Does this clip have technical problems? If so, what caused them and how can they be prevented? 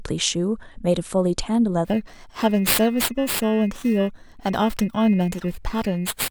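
Yes. From 1.85 s to the end at 6.31 s, the speech takes on a rough, metallic edge, most noticeable on bright, high-frequency sounds. This is periodic clock jitter: interference at around 2 kHz wobbles the converter's sampling clock, so every frequency in the signal gains sidebands spaced about 2 kHz above and below it. Preventing it means giving the converter a clean, well-shielded clock with a stable power supply, isolated from nearby interference sources.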